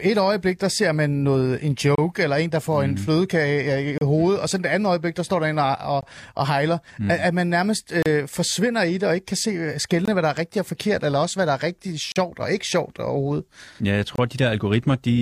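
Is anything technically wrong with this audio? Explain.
Yes. The speech has a recurring gap between stream segments, at 1.95–1.98, 3.98–4.01, 6.01, 8.03–8.06, 10.05–10.08, 12.12–12.16 and 14.16–14.18 s, roughly every 2 s. Each time, adjacent segments' timestamps fail to meet, so playback inserts 18 to 39 ms of silence. Nothing is lost, but the speech briefly stutters. The waveform shows flat, hard-edged dropouts, and the spectrogram shows thin vertical blank stripes across all frequencies at that steady 2-second spacing.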